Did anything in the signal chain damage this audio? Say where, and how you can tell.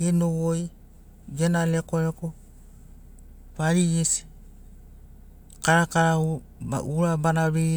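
No, no faults are audible.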